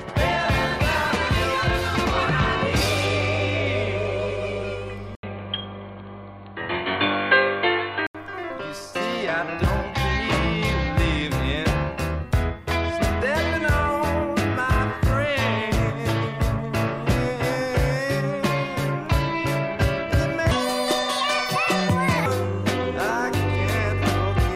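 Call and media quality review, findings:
Input switched to a poorer device, 5.15 to 8.15 s: about 80 ms dropout, then the sound turns dull and boxy. Level shifts roughly 5 dB and new background noise sits around 55 dB down. Likely capture-path swap to a narrowband mic or headset profile.

Section at the wrong speed, 20.51 to 22.26 s: audio runs 1.69x fast, pitch up close to ten semitones, high and rushed. Speed and pitch move together, so this is likely a playback or resample clock mismatch, not time-stretching.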